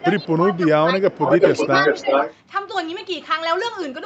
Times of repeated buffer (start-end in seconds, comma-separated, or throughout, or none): none